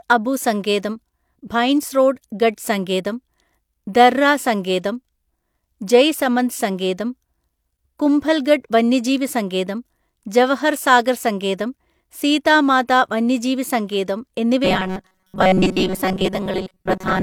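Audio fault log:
14.65–17.23 s, robotic sound from repeated short buffers: after "സീതാ മാതാ വന്യജീവി സങ്കേതം" speech becomes a rigid metallic buzz near 188 Hz, likely from audio repeatedly replaying brief buffers, mostly repeats.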